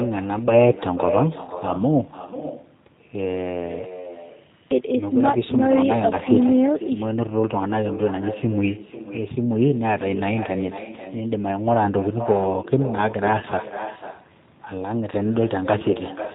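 From start to finish the speech is limited to narrowband G.729, with nothing above 4 kHz, which fits an 8 kbit/s stream; the damage is plainly audible as rough, synthetic speech. Throughout, echo with no canceller returns the talker's voice about half a second later, about 10 dB down, thinner than the original.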